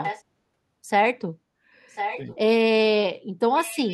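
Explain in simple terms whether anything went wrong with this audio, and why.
An echo leak: the far end likely plays the call on a loudspeaker, and its echo canceller let some sound back through. You hear a copy of the speech about 1.05 s late, fairly loud from 0 to 0.23 s and 1.89 to 2.36 s, fainter from 3.59 s to the end.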